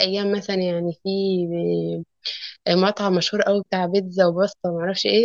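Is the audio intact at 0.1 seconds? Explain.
Yes, the speech at 0.1 seconds is intact, with no audible fault at that moment.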